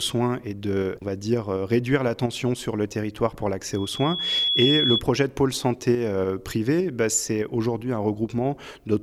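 A piercing 3.4 kHz tone swells over roughly 0.7 s from 3.73 to 5.02 s, peaking a few dB above the audio. This is loudspeaker feedback squeal, from a microphone picking up its own loudspeaker until that frequency self-reinforces.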